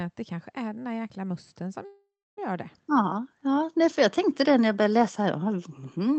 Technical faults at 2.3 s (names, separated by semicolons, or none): call audio freeze